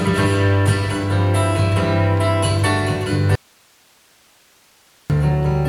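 From 3.35 s to 5.10 s there is an audio dropout to a faint residue: the sound cuts off abruptly for about 1.7 s, leaving only hiss roughly 35 dB down. The path likely stayed live after a signal break. The waveform collapses to a thin noise band, and the spectrogram shows broadband grey.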